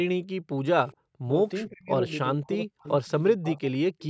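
From 0.34 to 0.62 s, the room sound sinks away. This is background gated by the echo canceller. While the far end's audio played from the loudspeaker, the canceller clamped the microphone down, by about 40 dB at its deepest. The background vanishes for roughly a third of a second, then comes back once the canceller releases. The gap sounds like an abrupt hole of dead air.

At 0.88 to 0.96 s, a brief echo leak appears. A faint, delayed copy of speech comes through, trailing the original by 414 ms. It sits far down, around 30 dB under the main speech. It is only a short scrap. The likely cause is an echo canceller on a loudspeaker side that failed to remove all of its microphone pickup and sent the remainder back.

Five times the speech is cut into by speech suppressed in double talk. These fall at 1.21 to 1.32 s, 1.68 to 1.91 s, 2.35 to 2.86 s, 3.02 to 3.10 s, and 3.36 to 3.90 s. The speech drops sharply, by some 30 to 40 dB. 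The shortest bite is a brief dip, and the longest swallows close to half a second. The likely cause is both sides talking at once. The canceller could not tell the talker from the loudspeaker echo, so it turned everything down.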